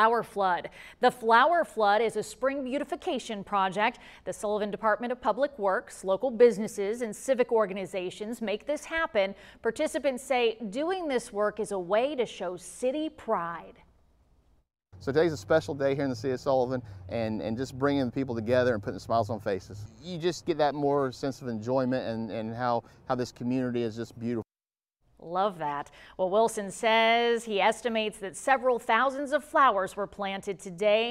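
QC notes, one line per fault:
No faults heard anywhere in this clip.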